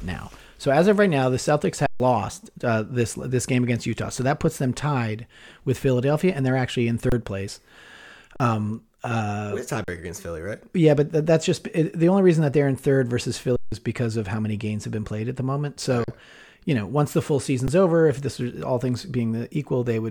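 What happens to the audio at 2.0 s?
Right around there you hit an underrun with held sample: from 1.86 to 2.0 s, about 137 ms, the output buffer ran dry and the converter just sat on its last value. The speech drops into a flat, frozen level with barely a click going in. When data comes back at 2.0 s, roughly 150 ms of live audio has gone missing from the speech.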